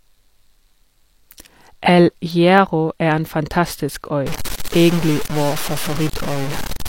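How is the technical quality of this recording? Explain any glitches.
The recording has clear technical faults. Three isolated clicks break the speech, and the final stretch becomes heavily distorted.

Dropped samples cause the clicks at 2.58 s, 5.06 s and 6.29 s. Each one is a likely loss of a tiny slice of the stream, about a tenth of a millisecond. The waveform jumps straight to a later value. Too little is missing to remove any speech. You hear a single sharp tick each time, a thin vertical line across the spectrum.

Low bit depth without dither affects the audio from 4.27 s to the end. The signal was likely cut to very few bits, which fits about 4 bits, and then truncated rather than dithered. The rounding error follows the speech, and it sits only about 10 dB below it. The result is coarse, gritty distortion that shifts with every syllable. Quiet tails break up, sputter or fall to silence.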